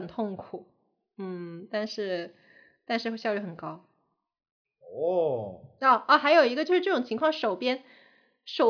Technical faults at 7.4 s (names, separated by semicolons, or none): none